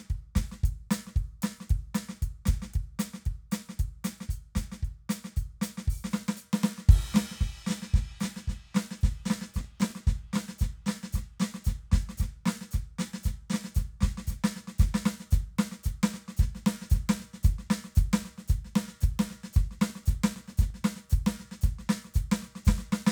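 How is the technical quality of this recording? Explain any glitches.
Two bursts of processor overload crackle mar the music, at 9.61 to 10.02 s and 19.90 to 20.77 s. In each burst the processor missed around twenty very short buffer deadlines, each skipped, leaving gritty tearing.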